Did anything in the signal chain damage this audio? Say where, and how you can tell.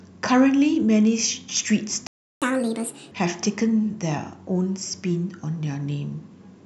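Yes. At 2.07 s the speech cuts to silence mid-flow and stays dead for about 0.35 s, resuming at 2.42 s. This is a playback stall: nothing in the surrounding audio explains the gap, and the clean restart rules out a missing recording. The likely cause is the player running dry or its output thread being blocked, so the device was fed silence until data arrived again.

Right after the restart, from 2.42 s to 3.11 s, the speech runs noticeably fast and high, then settles back to normal. This is catch-up at higher speed. The player resampled its backlog at 1.5 times normal speed to recover the time lost in the stall, which raises pitch by roughly seven semitones and gives the voice a clipped, chipmunk tint. The stage is again playback, not capture or the codec.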